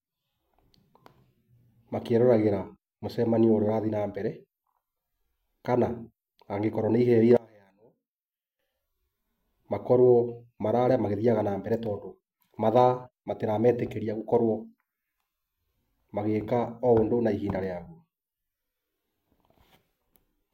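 From 7.37 to 8.59 s the speech abruptly sinks by about 28 dB into a faint residue, then comes straight back. That's what you get with one channel inverted: flip the polarity of one side, and everything common to left and right cancels when the two are summed to mono, so the centred speech all but disappears and only the small differences between channels remain. That's likely what's behind this stretch of just over a second.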